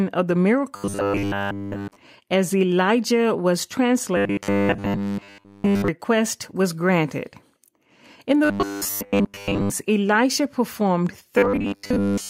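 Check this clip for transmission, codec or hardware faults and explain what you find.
Robotic sound from repeated short buffers shows up four times: 0.76–1.96 s, 4.17–5.88 s, 8.45–9.71 s, and 11.38 s to the end. The speech becomes a rigid metallic buzz pitched at 100 Hz. That is likely a roughly 10 ms chunk replaying while real audio is skipped, covering all of the first two stretches and most of the last two.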